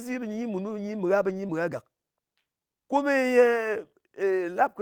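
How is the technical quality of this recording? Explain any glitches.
The recording has two kinds of network damage, clustered around 1.4 to 1.5 s and again near 3 s.

Lost packet rebuilt from error correction, at 1.43 to 1.45 s, 1.51 to 1.53 s and 2.95 to 3.01 s: packets went missing, and the decoder played the low-bitrate backup copy carried in the following packet. Each of the first two is a 20 ms stretch, and the third lasts about 40 ms, which fits two lost packets. There is no gap, but these moments sound rougher and noisier.

Short concealed packet loss, at 1.47 to 1.51 s, just before "mɨ gha": about 20 ms of audio arrived too late, with no backup to fall back on. The receiver continued the preceding sound for roughly 14 ms and then blended back into the real signal. Together with the two neighbouring rebuilt packets, this leaves a brief smear or wobble.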